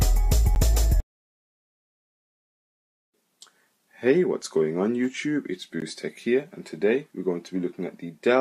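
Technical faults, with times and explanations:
0.55 s and 5.80 s, block of digital silence: the sound drops to silence for about 11 ms and then 16 ms, with no fade in or out. The first gap fits a 512-sample buffer that was not filled in time. The first gap, being under about 15 ms, is heard as a tick or dip rather than as silence. On the waveform they are flat lines, and on the spectrogram blank vertical strips.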